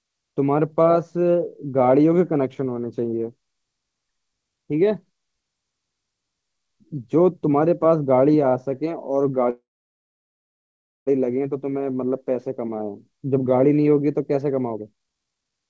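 At 9.50 s the speech stops advancing for about 1.57 s, a call audio freeze. The last sound carries on briefly as a fading buzz or hiss, then drops to near silence for about 1.44 s before the speech resumes at 11.09 s from where it stopped. Nothing is skipped; a gap has been inserted. This likely comes from packets held up in transit, which let the jitter buffer run empty while the receiver waited.

From 14.72 s to the end of the clip at 15.69 s there is a jitter buffer speed-up. The receiver held more audio than its target and trimmed repeated short pitch-period slices to catch up, removing roughly half a second. Playback runs at about 156% speed with the pitch unchanged, so the speech sounds hurried and clipped together. Throughout the clip the audio has nothing above 8 kHz, consistent with a G.722 call codec.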